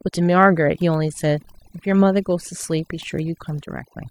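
Throughout, overdone noise removal zeroes bands near the noise estimate, leaving speech over near-silence with twinkling specks; the spectrogram shows a blank floor dotted with isolated blips.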